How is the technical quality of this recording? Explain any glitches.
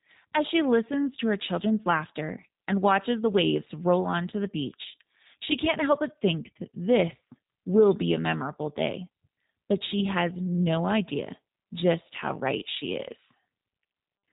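The speech has passed through a G.729 codec for its whole length, and the damage is plainly audible. The codec rebuilds each 10 ms frame from a vocal tract filter, a pitch estimate and a few pulses at about 8 kbit/s. That leaves the speech with an audible coded, synthetic texture and nothing above 3.8 kHz.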